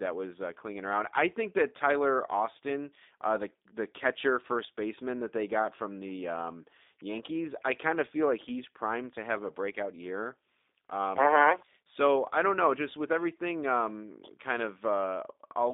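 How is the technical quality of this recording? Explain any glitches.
The speech has narrowband telephone quality throughout, with plainly audible G.729 codec damage for the whole clip. The codec models each 10 ms frame from a vocal tract filter, a pitch predictor and a few pulses, which fits an 8 kbit/s rate, so the speech sounds rough and synthetic. A spectrogram shows energy confined to about 250 Hz to 3.7 kHz, with empty bands above and below.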